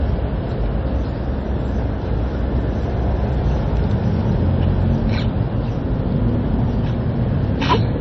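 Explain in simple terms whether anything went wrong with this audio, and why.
Heavy MP3 compression has damaged the whole recording, from start to finish. Nothing is left above about 7.5 kHz, so the top end sounds dull and boxed-in. The remaining detail has a watery, swirling quality, with metallic chirps on sharp or hissy sounds and softened attacks. That points to an encoder that likely ran short of data, stripped the treble, and let weak detail flicker in and out between frames.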